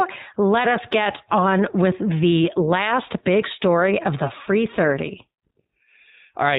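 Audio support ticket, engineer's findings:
iLBC codec, throughout: nothing above 4 kHz, plainly rough, synthetic speech texture. Frame-independent narrowband coding, fits the 20 ms, 15.2 kbps mode. Grainy excitation, not the muffled smear of low-bitrate predictive codecs.

Lost iLBC frames, 1.04–1.06 s: one 20 ms gap filled with a brief buzzy held-vowel sound, not silence. Decoder repeats the last pitch cycle plus noise. Clean recovery immediately after, no lingering smear.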